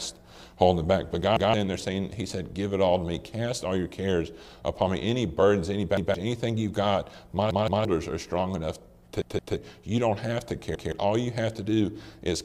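Repeated buffers occur at 1.37, 5.97, 7.51, 9.22 and 10.75 s. New audio arrived late, so the last block played again. The block lasts about 171 ms, which fits an 8192-sample buffer. Each repeat is a stutter with hard joins. At 7.51 and 9.22 s, it sounds three times.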